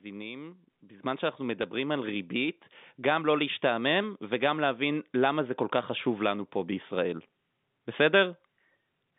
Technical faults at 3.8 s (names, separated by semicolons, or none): none